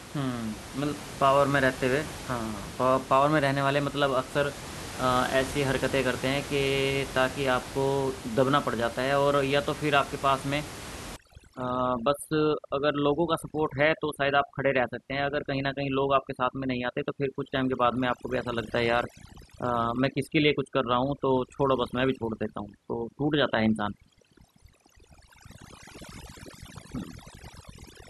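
A speech recording whose room noise sits about 13 dB below the voice until 11.16 s. From there to the end, the background drops and breaks up into twinkling specks. This is overdone noise removal: a noise reduction stage set too aggressively pulls any frequency band close to its noise estimate far down or out entirely, stripping quieter parts of the voice along with the background noise.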